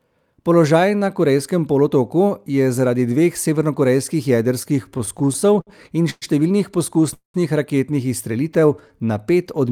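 From 4.63 to 6.25 s the speech catches and drags in a rapid run of small hitches, fifteen in all, the longest lasting 116 ms. These are repeated stalls (stutter). Packets kept arriving later than they were being played, so the jitter buffer ran dry over and over. Each time, the receiver stretched the last sound to cover the wait, fading it in the longer gaps. About 316 ms was filled this way, roughly a fifth of that stretch, and nothing was lost.

At 7.14 s the sound stops dead for about 0.23 s. A brief continuation of the last sound trails off and leaves about 130 ms of silence before the speech resumes where it left off. This is a call audio freeze. The likely cause is packets held up in transit long enough to empty the jitter buffer, so roughly 201 ms of filler and delay was inserted, with nothing missing.

From 8.50 to 9.07 s the speech slows to about 86% of its pace while the pitch stays put. 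Sounds are drawn out. This is a jitter buffer slow-down. With its reserve running low or its target delay just raised, the receiver repeated single pitch periods and fragments of pauses back to back to rebuild its cushion, adding about 88 ms to that half-second.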